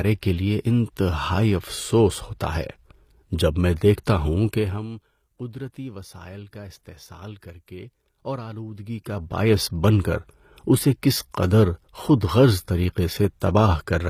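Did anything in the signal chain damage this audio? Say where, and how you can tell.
Yes. Throughout, the treble sounds rebuilt rather than captured: its harmonics don't line up with the band below, and the codec damage is plainly audible. The likely cause is HE-AAC compression at the codec stage, which codes only the lower spectrum and copies it upward by spectral band replication. This fits a bitrate near 24 kbps.

At 13.40 s, a sharp attack is preceded by a brief hiss spreading about 13 ms ahead of it, and the onset sounds soft or smeared. This is pre-echo from the codec: quantisation noise spread evenly across a transform block also fills the quiet moment before the attack.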